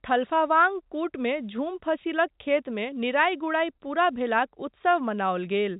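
No technical faults can be heard in this speech clip.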